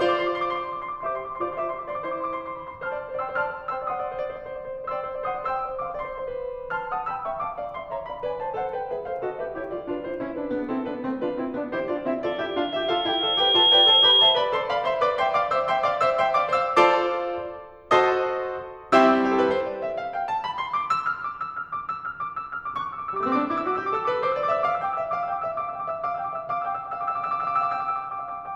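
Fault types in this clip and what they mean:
Loudspeaker feedback squeal: from 12.26 to 14.55 s a single tone near 3.3 kHz rises out of the music, swelling over about a second and a half until it sits roughly 10 dB above it. A microphone is picking up the loudspeaker it drives, and at that one frequency the round trip through the loop gains more than it loses. Each pass reinforces the tone until the squeal stops.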